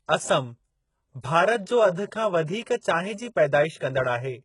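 From start to finish the speech carries heavy codec damage, likely from HE-AAC compression at a very low rate, which fits a bitrate near 12 kbps. Only the lower spectrum is properly coded. The treble is rebuilt from copied lower bands, so harmonics above the crossover fail to line up and s sounds come out gritty and metallic. On a spectrogram the upper region shows smeared, repeated patches, and nothing appears above 11.1 kHz.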